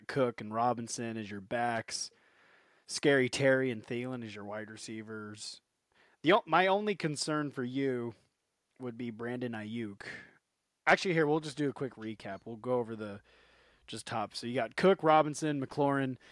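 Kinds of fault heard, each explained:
Nothing here stands out as a fault, and the speech comes across without any dropouts, clicks, distortion or glitches to point to.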